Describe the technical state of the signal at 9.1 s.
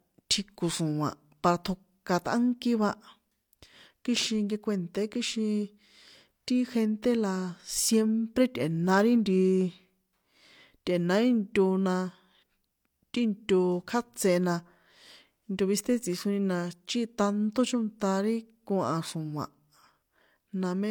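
At 9.1 s the speech signal is intact, with no audible fault at that moment.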